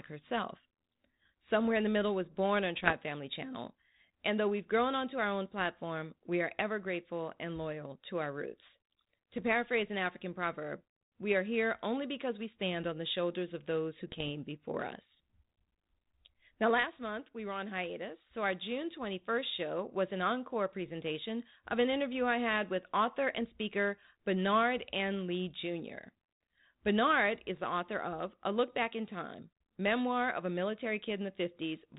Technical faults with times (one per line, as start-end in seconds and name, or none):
2.80-2.95 bit errors on an ADPCM link
9.38-9.43 bit errors on an ADPCM link
14.07-14.29 bit errors on an ADPCM link